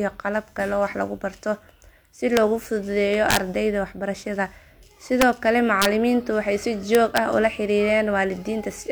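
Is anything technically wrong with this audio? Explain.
Yes. This speech has integer overflow at 2.37 s, 3.31–3.37 s, 5.22 s, 5.82–5.85 s and 6.95–7.18 s, where loud peaks exceed the integer limit by up to about 5 dB. Instead of being held at the maximum, they wrap to the opposite extreme, so you hear violent cracks, far harsher than the flattened buzz of clipping.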